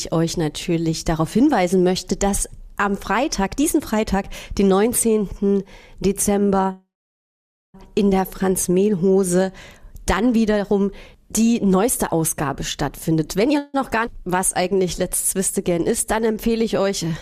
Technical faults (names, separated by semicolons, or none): call audio freeze; jitter buffer speed-up; skip ahead; jitter buffer slow-down